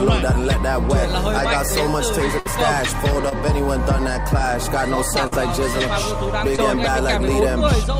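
At 2.39 to 2.47 s the sound stretches into a brief held, fading tail and then jumps ahead. This is a burst of packet loss. About 57 ms was filled by continuing the last sound, 40 ms of real audio is gone, and the timing shifts by 17 ms. At 3.29 to 3.33 s a quick smear or wobble passes. This is short concealed packet loss: a 20 ms hole was patched from the preceding sound and blended back. The same pattern recurs: a burst at 5.27 to 5.34 s, with 46 ms filled and 40 ms lost, then a short concealed loss at 6.56 to 6.60 s, again with 20 ms patched.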